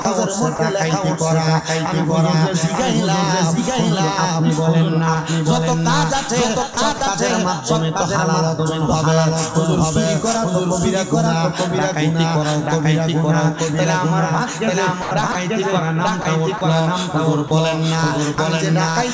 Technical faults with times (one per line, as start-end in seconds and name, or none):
0.00-19.14 doubled audio track
0.02-0.05 sound dropped by the voice detector
0.56-0.59 sound dropped by the voice detector
6.74-7.01 sound chopped by the voice detector
15.02-15.35 sound chopped by the voice detector
16.22-16.25 sound dropped by the voice detector
16.58-16.61 sound dropped by the voice detector
17.48-17.51 sound dropped by the voice detector
18.35-18.38 sound dropped by the voice detector